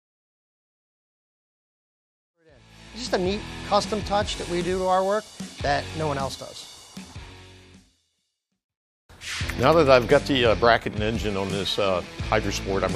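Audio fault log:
No faults detected.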